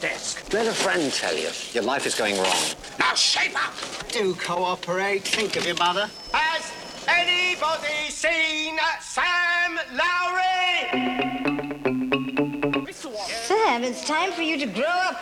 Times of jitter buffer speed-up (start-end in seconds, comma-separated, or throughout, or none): none